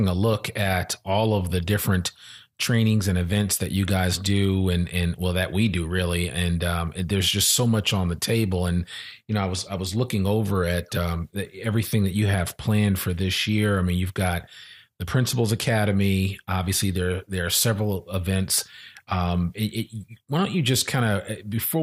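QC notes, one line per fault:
17.87–21.82 s, resampler restarted on every block: right after "obviously there there are", the speech gains a buzz at 100 Hz that rides only on the signal. The sample-rate conversion, which points to a 44.1 kHz to 48 kHz change, was run afresh on each 10 ms block, so the converter lacked the true neighbouring samples at every block edge. The resulting small error at each seam repeats a hundred times a second and fuses into a buzz instead of separate ticks.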